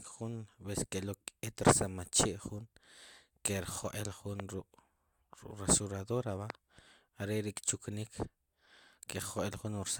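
A brief electrical disturbance, likely a voltage pulse from a plug, switch, static discharge or driver glitch, entered the signal chain twice and was added on top of the speech. Each loud pop lasts about 20 ms, first from 4.40 to 4.42 s and again from 6.50 to 6.52 s. Both are single sharp pops peaking roughly 15 dB above the speech, which carries on underneath without interruption.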